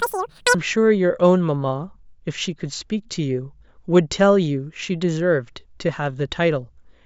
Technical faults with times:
0.00-0.54 wrong sample rate

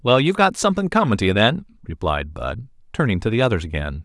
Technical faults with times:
none

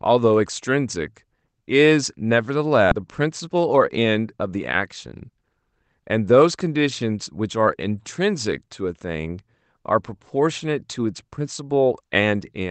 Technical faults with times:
2.91 skip ahead
3.47-4.06 jitter buffer speed-up

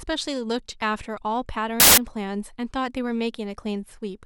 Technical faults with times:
1.80-1.98 samples built from the wrong bytes

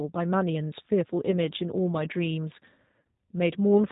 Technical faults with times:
0.00-3.92 G.729 codec
1.32-1.34 VoIP packet loss concealed by the speech codec
2.97-3.04 VoIP packet loss concealed by the speech codec

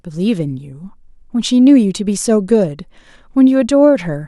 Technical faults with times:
none

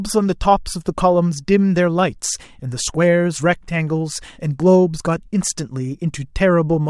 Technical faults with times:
none

